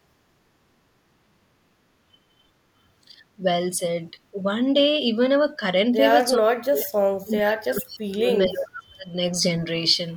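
An echo canceller likely turned the talker down while both sides spoke at once, producing speech suppressed in double talk: brief dips at 3.06–3.14, 3.36–3.44, 4.11–4.37, 5.52–5.62 and 5.94–5.99 s, then deep cuts of roughly 40 dB from 6.37 to 8.30 s and about 35 dB from 8.48 to 9.12 s. Within that stretch, at 7.40–7.56 s, an echo leak occurs: loudspeaker pickup likely got past the canceller and was sent back, heard as a short copy about 433 ms late and about 15 dB below the speech.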